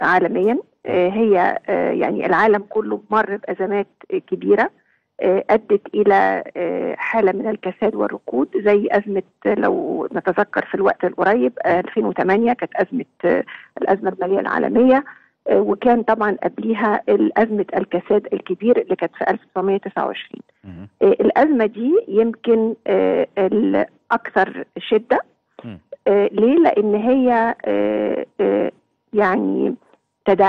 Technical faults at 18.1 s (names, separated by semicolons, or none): none